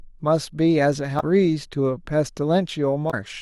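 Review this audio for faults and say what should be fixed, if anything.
Damaged data in a compressed stream causes two brief glitches, at 1.16 to 1.23 s and 3.07 to 3.14 s. Each lasts about 70 ms. Corrupted bytes make the decoder misread frames and resync. Verify stream integrity with checksums and retransmit or re-encode damaged segments.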